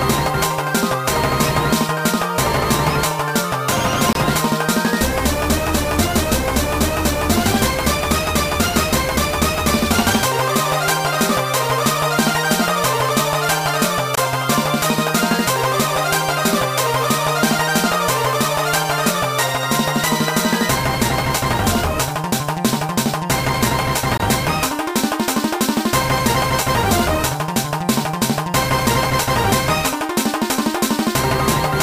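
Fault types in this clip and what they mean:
Gap between chunks: 23 ms silences inserted at each 10-second chunk join (4.13, 14.15, 24.18 s), showing as hard-edged waveform dropouts and blank spectrogram strips.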